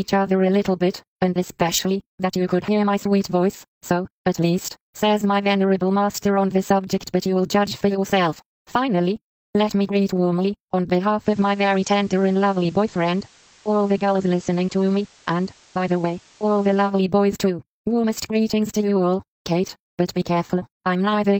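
From 11.17 to 16.94 s the receiver shows digital radio blending to analogue. It cross-fades over about 102 ms to the FM signal, where steady hiss sits roughly 30 dB down and level drops about 1 dB. The smooth, reversible blend sets it apart from a codec dropout.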